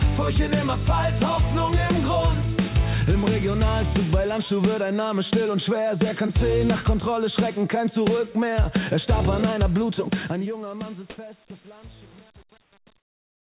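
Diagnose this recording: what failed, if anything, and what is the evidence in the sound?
Comfort noise in place of the background, at 11.10 to 11.18 s and 12.62 to 12.72 s, in the call-processing stage: the real background gives way to a flat, featureless hiss, about 12 dB different in level the first time and about 2 dB the second. The likely cause is discontinuous transmission, with the receiver synthesising noise while the sender paused.

Sound dropped by the voice detector, at 11.48 to 11.50 s, also in call processing: about 10 ms of actual sound vanishes into steady noise before resuming. The likely cause is the sender's detector misjudging a quiet moment as background, within the call path's 4 kHz band limit.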